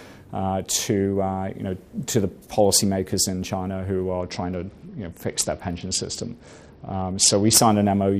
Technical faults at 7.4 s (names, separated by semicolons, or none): Bluetooth SBC bit pool drop